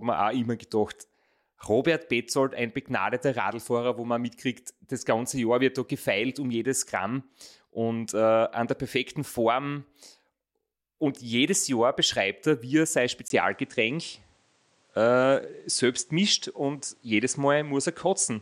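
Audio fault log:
13.28–18.41 s, input switched to a poorer device: after "er wie er sein" a 20 ms gap precedes a duller sound with nothing above 9.9 kHz and a new noise floor roughly 40 dB down, level about unchanged, likely a change of capture device.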